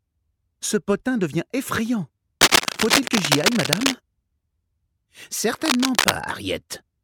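From 2.41 to 3.95 s, dense, irregular crackling sits over the sound at about 5 dB above it; a shorter burst at 5.65 to 6.11 s is roughly level with it. This cable scratch noise is likely a worn lead or connector being moved.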